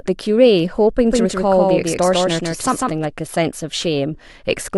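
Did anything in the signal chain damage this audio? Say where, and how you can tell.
Yes. From 1.07 to 3.05 s the speech has a doubled audio track: a second full-band copy trails about 150 ms behind at roughly equal level, dry and abruptly switched on and off. That's likely a slower second capture or monitoring path mixed back in.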